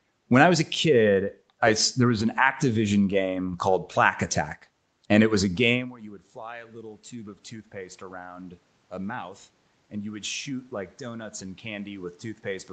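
Automatic gain rising after "and it was a" (5.73 to 8.66 s), when the input had dropped about 21 dB, and again after "a mouth" (9.91 to 12.73 s): speech and background swell together, about 5 dB the first time, as a steadily widening waveform envelope.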